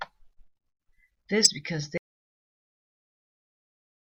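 At 1.43 to 1.47 s, damaged data in the compressed stream produces a short chirp, squawk, click or hole as the decoder misreads corrupt frames and resyncs on the next header. From 1.98 s to the end, an audio dropout to silence leaves silence with no room tone, likely from the input being lost while recording continued.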